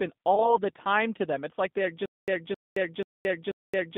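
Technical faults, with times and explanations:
Throughout: G.729 codec at 8 kbit/s; the vocal-tract model and sparse pulse excitation make the speech rough and synthetic, band-limited to roughly 150 Hz–3.7 kHz.
0.35–0.56 s: VoIP packet loss concealed by the speech codec; 20 ms of audio went missing, fitting one lost packet. The decoder extrapolated from its last pitch and filter with falling gain, and the voice stays weakened afterwards.
2.06 s to the end: stutter with silent gaps; a 264 ms fragment repeats four times with 222 ms of digital silence between, every 486 ms, likely from a stalled stream retrying.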